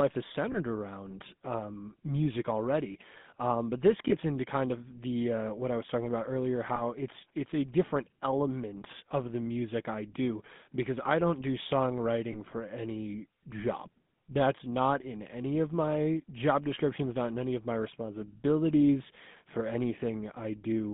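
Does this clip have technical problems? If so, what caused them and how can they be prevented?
Yes. The whole clip carries GSM full-rate codec damage. Speech sounds buzzy and gravelly, and the line is narrowed to roughly 150 Hz to 3.6 kHz. That fits the 13 kbps full-rate coder, which rebuilds the voice from sparse pulses through a vocal-tract model. Using a wideband codec prevents it.

Lost GSM frames cause brief rough, metallic smears at 0.52 to 0.57 s, before "around um music already", and at 4.08 to 4.13 s, between "already um but this" and "into kind of the". They also occur at 6.76 to 6.82 s and at 12.32 to 12.36 s, before "for any job that's". Each points to one missing 20 ms frame that the decoder patched by repeating the previous frame. A cleaner radio link or error protection prevents this.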